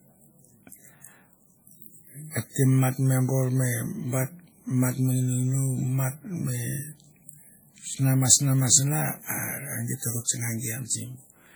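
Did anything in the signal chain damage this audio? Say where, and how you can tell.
Yes, at the codec stage. Throughout, the speech rings and washes, with hiss breathing alongside it. That points to WMA compression, likely at a low bitrate near 32 kbps.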